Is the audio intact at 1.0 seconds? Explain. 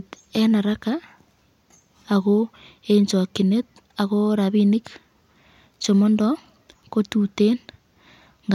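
Yes, the speech at 1.0 seconds is intact, with no dropout, click, distortion or other technical fault at that moment.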